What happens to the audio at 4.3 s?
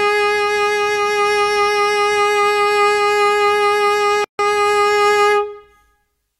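At 4.3 s the music drops out for about 148 ms, from 4.24 to 4.39 s: a gap at a join of encoded pieces. Two separately encoded segments were spliced without trimming, so the encoder's start-up delay and final-frame padding remain as silence between them. The codec smears the edges of the gap, so the truly silent part is shorter, and the music resumes exactly where it stopped rather than skipping ahead.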